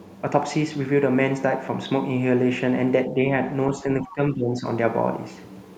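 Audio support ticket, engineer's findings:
Speech suppressed in double talk, 3.09–3.17 s and 4.02–4.66 s. Speech level dips slightly in the first, then about 15 dB for roughly half a second in the second. Likely the echo canceller, unable to separate near-end speech from far-end echo, attenuating both.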